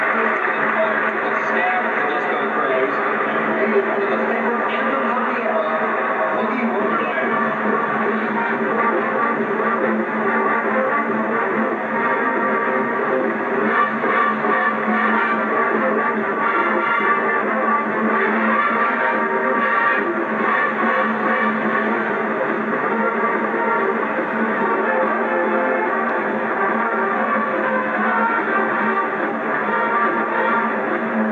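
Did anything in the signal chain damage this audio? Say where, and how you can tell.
No, nothing in the signal chain damaged this audio.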